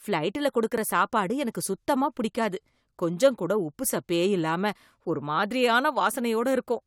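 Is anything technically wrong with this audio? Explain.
Yes. There is an overlap between stream segments at 0.78 s, just before "சாப்பாடு எனக்கு சுத்தமா பிடிக்காது", and at 4.75 s, just after "கொஞ்சம் கூட உப்புசப்பே இல்லாம". Segment timestamps overlapped, so the player discarded about 10 ms and then 5 ms of real speech. The waveform jumps, giving a click or tiny skip roughly every 4 s, matching the segment length.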